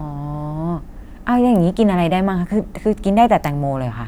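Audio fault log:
Nothing to flag here; the speech comes through without any audible fault.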